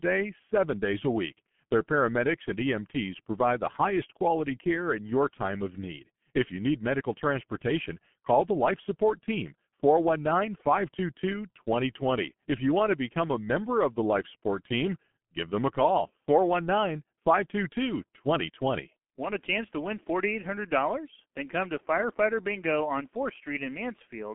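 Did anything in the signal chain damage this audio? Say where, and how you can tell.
Yes, at the codec stage, throughout the clip. The speech is muffled and hoarse, with blurred consonants and nothing above 3.8 kHz, inside a 150 Hz to 3.4 kHz telephone band. That heavy damage is the G.723.1 codec, whose sound fits roughly 6 kbit/s.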